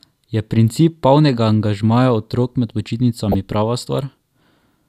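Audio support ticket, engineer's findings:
Brief blip over speech, 3.32–3.34 s. DAB burbling: sparse weak-reception bit errors escape error correction, putting noise blips in sub-bands, consistent with one corrupted audio frame.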